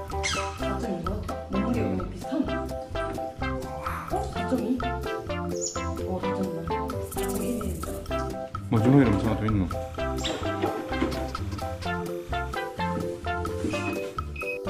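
From 9.67 to 12.53 s a faint chirping warble sits behind the sound. This is timecode bleed: 30-frame linear timecode leaking in from a neighbouring line, toggling near 1 and 2 kHz.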